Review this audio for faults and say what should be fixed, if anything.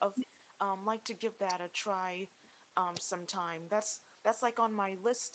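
Nothing here needs fixing; the speech simply tops out at about 8 kHz, which is just the normal band limit of a call's codec.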